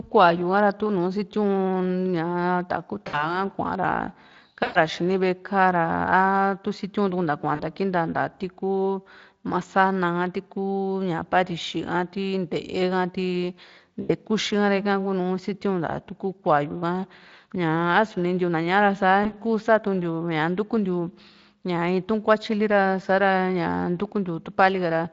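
Speech, carried over a lightly coded Speex link, shows VoIP packet loss concealed by the speech codec at 3.07–3.41, 4.63–4.78, 7.55–7.62, 14.01–14.11 and 19.23–19.36 s. In each dropout, from 20 to 120 ms long, the decoder extends its last pitch into a fading buzzy tone or coloured noise, visible as smeared harmonics and a sagging waveform envelope.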